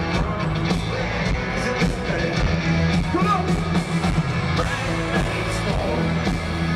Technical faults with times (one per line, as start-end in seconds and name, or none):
none